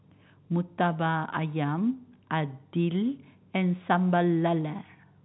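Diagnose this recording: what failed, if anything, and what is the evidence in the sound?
Nothing stood out on listening to this telephone-band speech recording, which carries the narrow 4 kHz ceiling of its G.711 call path.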